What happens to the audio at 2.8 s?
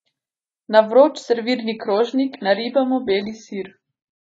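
The adaptive stream has dropped to a lower bitrate, from 1.58 s to the end of the clip. A slowed connection made the player switch versions, likely from about 96 to 19.5 kbit/s. Quality changes suddenly with no gap, nothing remains above 7.1 kHz, and codec artefacts rise.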